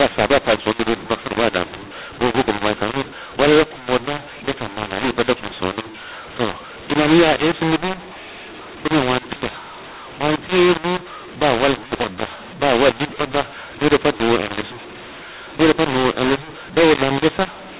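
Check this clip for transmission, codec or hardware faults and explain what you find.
One codec fault runs through the whole speech clip: a mu-law and A-law mix-up on the telephone path, which otherwise shows the 4 kHz ceiling of G.711 coding. The speech is mu-law coded and decoded as A-law. The mismatched companding curves scramble every sample's level, so the speech turns harsh while the pauses fill with noise. Plain clipping or overload would only break up the peaks.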